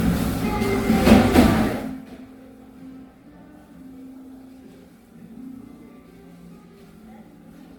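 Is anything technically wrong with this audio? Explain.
Yes. Throughout the clip the sound is swirly, smeared and hollow, and attacks blur. That's likely generation loss: repeated lossy passes, consistent with about five rounds of MP3 near 96 kbit/s, each requantising on a shifted frame grid so noise and spectral holes pile up.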